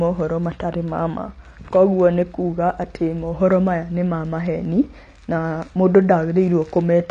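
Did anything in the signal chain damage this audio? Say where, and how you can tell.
Yes, at the codec stage, throughout. Nothing sounds above 9.7 kHz, and sibilants smear and fizz. Likely AAC compression, quantised hard at a bitrate near 32 kbps.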